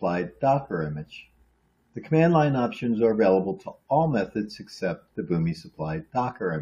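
No technical faults can be heard anywhere in this clip. There is nothing to place on the timeline and nothing in the sound that points to a breakdown along the audio path.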